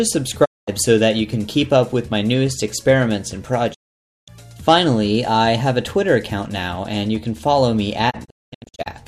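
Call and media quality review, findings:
Digital broadcast dropout at 0.44–0.69 s, 3.73–4.29 s and 8.09–8.88 s. The audio fades to silence over 20 ms, and the missing material is lost. The last event is several short holes, the longest 216 ms. The receiver mutes on bad frames, leaving clean silence rather than packet-loss concealment smear.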